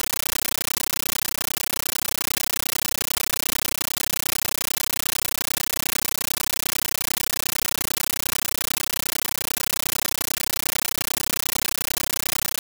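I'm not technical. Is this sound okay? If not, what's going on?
No. Throughout the clip, the speech is replaced by a compressed stream played as audio: undecoded Dolby Digital data heard as loud static, in bursts about 13 ms long repeating about 31 times a second. That steady chattering rhythm with silent gaps sets it apart from ordinary hiss.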